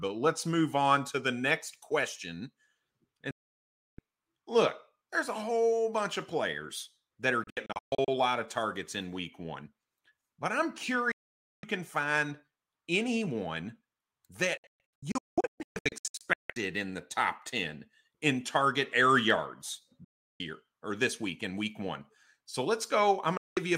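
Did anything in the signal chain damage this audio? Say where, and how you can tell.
Yes: a digital broadcast dropout at the receiver. The speech mutes with a fast fade at 3.31, 7.44, 11.12, 14.57, 20.04 and 23.37 s, scattered into short holes at 7.44 and 14.57 s. Silence in steps fitting 32 ms frames marks failed frames being muted, not concealed network loss.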